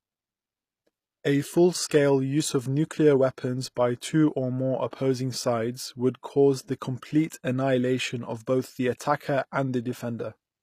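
Across the whole speech clip the treble sounds synthetic, which points to a low-rate HE-AAC compression at around 24 kbps, likely the cause. The upper band is rebuilt by copying lower bands upward, so sibilants turn gritty and lispy, with nothing above 15 kHz.

Pre-echo appears from 1.88 to 1.91 s and again from 4.91 to 4.93 s, spreading about 28 ms and 20 ms respectively. Block-wide quantisation noise leaks into the quiet gap before a sharp onset, giving a brief hiss and a softened attack.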